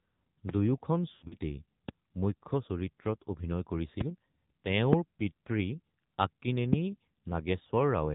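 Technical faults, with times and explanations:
throughout, AMR narrowband mobile codec: The speech is band-limited with nothing above 4 kHz, and it has that buzzy, synthetic edge from the vocal-tract model running short of pulses. The damage is plainly audible, which fits a low mode around 7.4 kbps.
1.12 to 1.37 s, lost AMR speech frames: The decoder keeps repeating the last good pitch and vocal-tract settings with falling gain, so the speech smears and sags. About 140 ms goes missing across a 200 ms stretch, with the longest gap about 100 ms, consistent with roughly seven dropped 20 ms frames.
0.49, 1.88, 4.01, 4.93 and 6.73 s, loud pop: Each is a single sharp pop lasting about 0.02 s and peaking at around 20 dB above the speech, with the talking carrying on underneath. It's likely a voltage step from a plug, switch, static or driver glitch.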